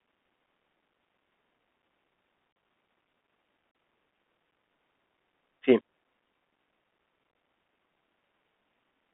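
The Bluetooth CVSD headset codec shapes the whole speech clip. The band runs only from about 200 Hz to 3.4 kHz, so the speech sounds thin and telephone-like. CVSD sends one bit per sample, saying only up or down, and its step size adapts. That fits a 64 kbps link. Here the coding damage is plainly audible. Fast, loud changes outrun the step, leaving the speech rough and grainy.

Unconcealed Bluetooth headset packet loss strikes three times. At 2.52 to 2.56 s, about 34 ms of speech drops out. The same gap recurs at 3.71 to 3.75 s. Each hole fits roughly ten short packets lost between headset and phone. Nothing fills them in. The speech simply stops with hard edges. At 7.31 to 7.35 s, about 34 ms is lost again, but scattered over nearly 38 ms. The longest run is about 19 ms, so that spot sounds chopped rather than cleanly cut.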